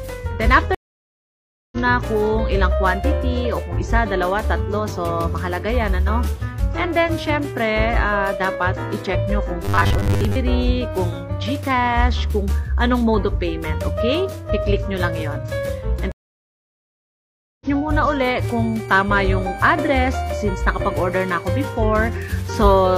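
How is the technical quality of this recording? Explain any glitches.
The recording has several distinct glitches: two dropouts, a short stretch of buzzing, and a high whistle near the end.

A stream reconnect occurs twice, from 0.75 to 1.77 s and from 16.12 to 17.66 s. The connection dropped, leaving about 0.97 s and then about 1.49 s of silence, and a new decoder picked up the stream roughly a second further on. The waveform shows flat gaps followed by a jump in content.

From 9.65 to 10.36 s the audio turns into a rigid, metallic buzz at 100 Hz. This is robotic sound from repeated short buffers, likely caused by the same 10 ms chunk being replayed in place of most of the real audio. On a spectrogram it appears as evenly spaced harmonic lines.

From 18.38 to 21.54 s a switching supply whistle sits around 2.3 kHz, about 25 dB below the signal, drifting between 2.26 and 2.34 kHz. It comes from a power supply oscillating in the audible range. 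On a spectrogram it shows as a thin, wavering horizontal line.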